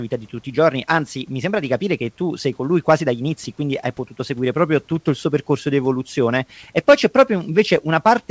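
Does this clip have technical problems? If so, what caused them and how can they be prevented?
No, this clip has no technical problems, so there is nothing to prevent.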